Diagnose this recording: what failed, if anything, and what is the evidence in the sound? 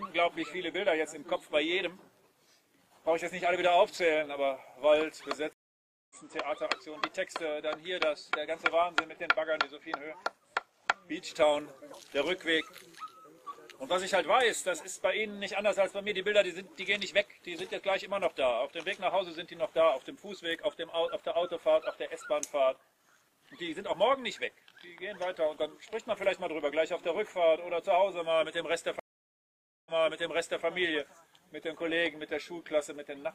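A stream reconnect, twice: the network connection dropped and the player restarted its decoder mid-stream. At 5.53 s there are 570 ms of silence, then the sound resumes about 0.7 s further on. At 29.0 s an 864 ms gap ends with 0.79 s replayed as the server resends.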